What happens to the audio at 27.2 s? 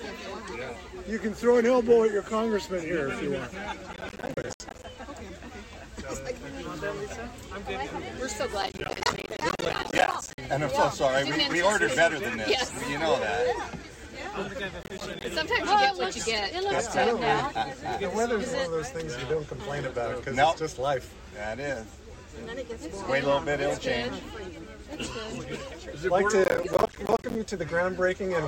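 At 27.2 s the audio is inside a burst of processor overload crackle running from 26.44 to 27.35 s. The processor repeatedly misses its deadlines for short buffers of around 10 ms, and dozens drop out as brief silent gaps. Their hard edges add up to a gritty tearing over the sound until the load eases.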